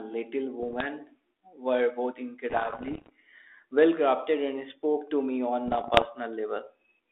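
Speech over a narrowband G.726 link, with bit errors on an ADPCM link at 0.62 to 0.87 s, 2.5 to 3.1 s and 5.66 to 6.07 s. Flipped bits upset the decoder's step size and predictor, so pops, rough bursts and brief level jumps ring on. The middle burst is harshest.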